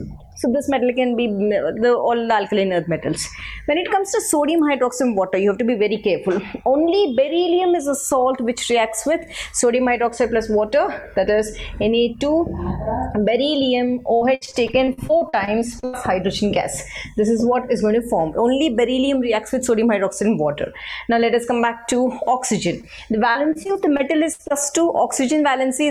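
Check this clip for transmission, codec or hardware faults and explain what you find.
Four faults of three kinds can be heard, all in the second half except one early click.

At 4.59 s there is an electrical switching spike: a sharp snap laid over the sound, lasting only a few milliseconds. It is likely an arc from a nearby switch, motor or static discharge coupling into the audio line. On a waveform it appears as a narrow vertical spike standing above the surrounding signal. On a spectrogram it is a thin vertical line spanning almost the whole frequency range.

From 14.15 to 15.95 s, and again from 23.31 to 24.52 s, there is repeated packet loss with a robotic sound. Audio kept failing to arrive, and each hole was patched by extending the last sound before the real signal returned, only for the next hole to follow. The first stretch sounds like about fifteen dropouts, with the longest near 83 ms and roughly 0.52 s patched in total, about 29% of that span. 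The second has about nine, the longest near 59 ms, covering about 19%. The result is choppy, with pieces missing. A spectrogram shows repeated blocks of smeared, held-over harmonics that look too steady. The waveform shows a stuttering, periodic-looking texture between the normal segments.

At 22.81 to 22.85 s there is a short concealed packet loss of about 20 ms. The receiver bridged the hole by continuing the preceding sound and blending back into the real audio. It is heard as a brief smear or wobble. On a spectrogram it is a tiny patch of frozen or blurred detail, and the waveform shows a short, overly regular section.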